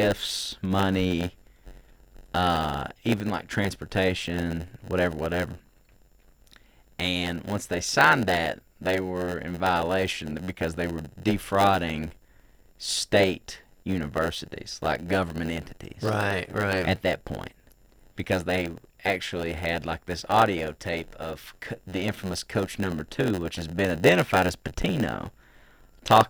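From start to finish the speech carries a block size mismatch (padded): each block arrives short and is topped up with silence, so a gap recurs about 92 times a second, giving a 91.9 Hz buzz. The speech plays slower, at 0.919 speed, with its timbre unchanged.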